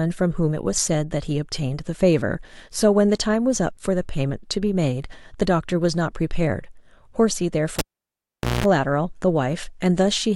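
A cable pulled and plugged in interrupts this speech clip from 7.79 to 8.66 s. A pop marks the live lead coming out, then about 820 ms with the connection open, mostly near silence. As the plug goes back in, only the tip makes contact at first, so the unshielded conductor picks up about 200 ms of 60 Hz mains buzz before a second pop as the full connection seats and the sound returns.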